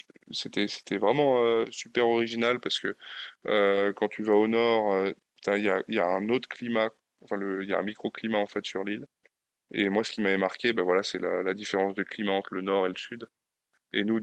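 At 1.45 to 1.55 s the speech turns briefly rougher and noisier. This is a lost packet rebuilt from error correction. The following packets carried low-bitrate Opus copies of the missing audio, and the decoder played those instead. About 60 ms sounds this way, which suggests three lost packets. There is no gap, only a coarser patch.

At 3.67 to 3.73 s comes a short concealed packet loss. Here 40 ms never arrived. The decoder stretched the last sound forward to fill it. You hear a brief smear or wobble. Overlapping its end, from 3.71 to 3.85 s, another 80 ms is rebuilt from error correction. It sounds grainy and noisy, pointing to four lost packets.

At 7.87 to 8.01 s another 80 ms is rebuilt from error correction, with the same rough texture.

At 10.15 to 10.19 s a 20 ms concealed loss gives a small smear or wobble. Its last 20 ms, 10.17 to 10.19 s, overlaps a one-packet error-correction rebuild.

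At 12.93 to 12.99 s, 40 ms is rebuilt from error correction, likely two packets. It sounds briefly coarse.

Throughout, the Opus call path at 32 kbps limits the audio to about 12 kHz.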